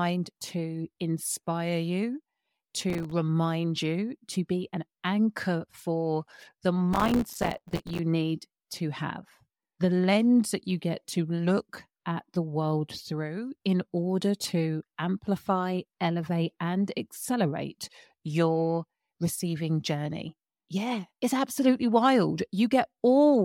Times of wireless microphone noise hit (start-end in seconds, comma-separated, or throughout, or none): none